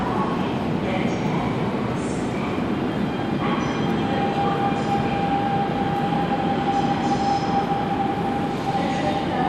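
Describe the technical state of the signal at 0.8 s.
At 0.8 s the audio is intact, with no dropout, clipping, glitch or other fault in the signal.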